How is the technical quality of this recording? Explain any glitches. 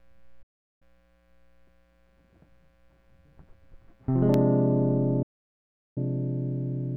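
The music recording has clear technical faults: two broadcast dropouts and a short burst of disc ticks.

A digital broadcast dropout mutes the music from 0.42 to 0.82 s and again from 5.22 to 5.98 s. The receiver stopped getting valid frames and muted, fading out in about 8 ms. The losses run about 0.38 s and 0.74 s. That music is simply gone.

CD scratch ticks appear between 4.15 and 4.54 s. There are three small clicks, each under a millisecond. A blemish defeated the disc's error correction on successive turns. The player patched or muted those samples, leaving regular ticks.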